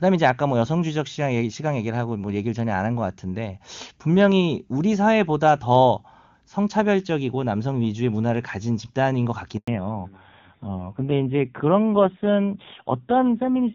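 At 9.58 s there is a handover gap. The speech cuts out for 100 ms, from 9.58 to 9.68 s, while the call switches networks and no frames arrive.

From 9.68 s to the end, the call falls back to narrowband. Before this, the wideband HD Voice sound is clear. Afterward nothing above 4 kHz remains, and the speech turns dull and rough, which fits a drop to low-rate AMR narrowband.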